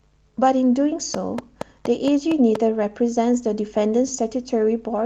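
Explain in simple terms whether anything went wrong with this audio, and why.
A train of clicks runs through this speech from 1.14 to 2.56 seconds: about seven sharp, evenly spaced ticks, roughly four per second, standing out above the sound. The likely cause is electrical interference from nearby equipment or a faulty connection or power supply.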